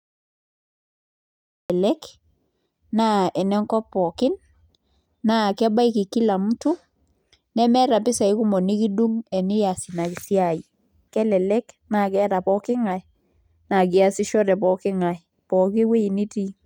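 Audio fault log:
0.00 to 1.70 s, cut-off start: the speech doesn't get a proper beginning. There's dead digital silence until 1.70 s, then it jumps straight in mid-sound with no natural attack, because the capture kicked in late and missed the opening.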